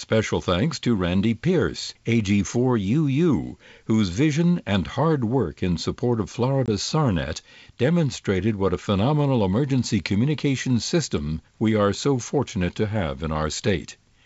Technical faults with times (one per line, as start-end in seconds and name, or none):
6.66-6.70 packet loss on an ADPCM call